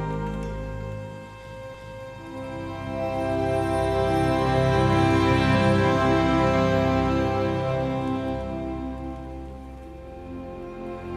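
At 1.74 s the audio stutters: the stretch running to 2.12 s, about 0.37 s long, plays through and then immediately plays again. This is repeated frames. A run of compressed frames, which fits a run of four, was written or sent twice, so the decoder replays it once more, and the clip grows by 371.5 ms.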